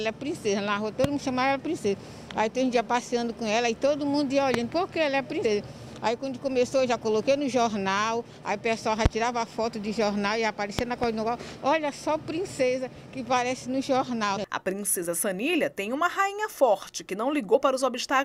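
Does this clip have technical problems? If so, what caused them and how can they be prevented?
Yes. Sharp loud pops, roughly 20 dB above the sound, hit at 1.04, 4.54 and 9.06 s, with a double pop from 10.79 to 11.06 s; a voltage spike from a plug, switch or static is the likely cause. Secure connections and mute before switching to prevent them.

Brief smeared blips mark compressed frames skipped at 5.44, 12.59, 14.36 and 17.54 s, where the audio jumps ahead by a tenth of a second or less, consistent with dropped 21.3 ms frames. Verify file integrity and use reliable transfer to prevent it.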